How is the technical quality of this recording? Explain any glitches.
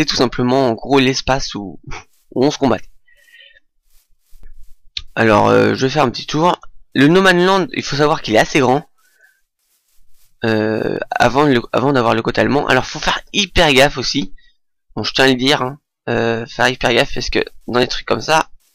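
The recording has hard clipping throughout. A stage received a signal about 7 dB more than it could pass, so roughly one to two percent of the waveform has its peaks cut flat, adding high harmonics heard as crackle or fuzz on the loud parts.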